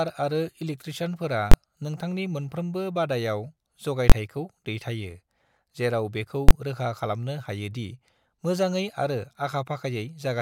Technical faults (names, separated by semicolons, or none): invalid numbers at full scale